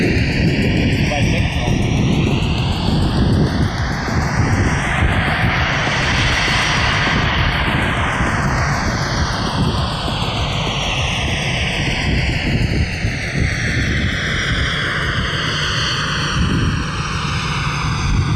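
Right through the clip the channels drift apart. Two clocks disagree by roughly 70 ppm, so the offset creeps to about a millisecond, giving a slow flanging sweep in mono.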